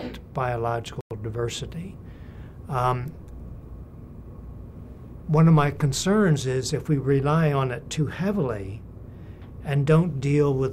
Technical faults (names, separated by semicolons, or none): Bluetooth stall